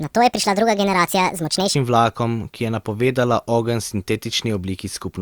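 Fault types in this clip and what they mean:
Section at the wrong speed: from 0 to 1.74 s, just before "vlakom ki je", the speech runs 1.52 times too fast and sits about seven semitones high, likely from playback against the wrong clock; a spectrogram shows harmonics spread upward and squeezed in time, dropping abruptly afterward.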